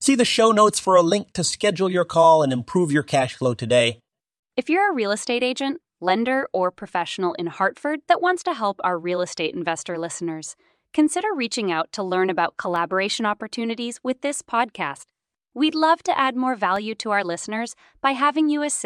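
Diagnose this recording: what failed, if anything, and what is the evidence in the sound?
Regular ticks in the speech every 2.0 s from 10.77 to 18.77 s, about five, each a sub-millisecond silent gap: periodic USB or driver dropouts at the driver or buffer stage.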